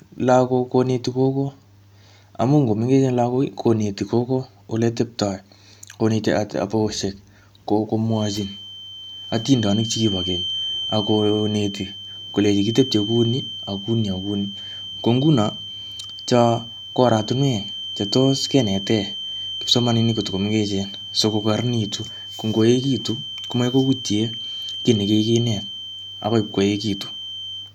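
From 8.06 s to the end of the clip, a feedback whistle sits behind the speech: a thin, steady tone at 3.1 kHz, about 10 dB below the voice, swelling and fading slowly in level but never building up. The likely cause is a loudspeaker-to-microphone loop running just at the edge of feedback, where gain at that one frequency is high enough to sustain the tone yet not enough to make it grow into a howl.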